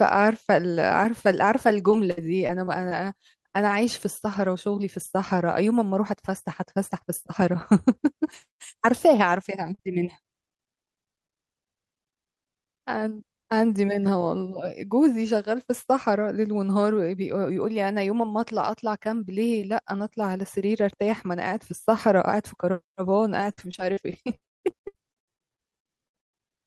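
It's a speech clip, and the trouble is network dropouts. From 1.91 to 2.99 s there's repeated packet loss with a robotic edge: five gaps, the longest 63 ms. The receiver papers over each one by stretching the last bit of sound, so about 12% of that stretch is filled-in audio and the speech goes choppy. The same thing comes back much worse from 23.4 to 26.5 s. There are 23 gaps there, the longest 177 ms, and about 36% of the span is concealment, so the voice gets properly mechanical and holey. Between 9.33 and 11.31 s you've got scattered short gaps instead, around four isolated losses of roughly 40 ms at most, each patched the same way. That's only about 5% of the span, so it stays mostly clear apart from a few quick hiccups and smears.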